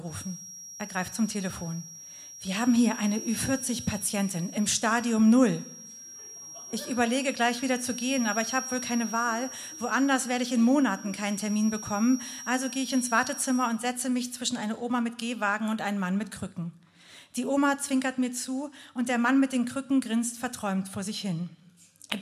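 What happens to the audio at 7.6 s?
A feedback whistle runs from 0.0 to 13.84 s. A thin 5.7 kHz tone sits about 15 dB below the sound, likely from a speaker-to-microphone loop held at the edge of feedback.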